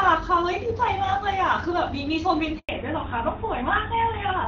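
A handover gap cuts the speech at 2.59 s: the signal dies away within a few tens of milliseconds and stays silent for 100 ms, until 2.69 s, while the call moves between networks and no speech frames arrive. On a waveform this shows as a flat line; on a spectrogram, a blank vertical stripe across every frequency. Before the gap the call sounds clear and wideband, consistent with HD Voice coding at around 12.65 kbit/s with only light codec damage. When the sound resumes at 2.69 s the call has fallen back to narrowband and stays that way to the end, likely onto GSM full rate at 13 kbit/s. Nothing remains above 4 kHz, so the voice turns duller and rougher. A spectrogram shows a hard horizontal ceiling at 4 kHz from that point on, with the upper band that was filled before the gap now empty.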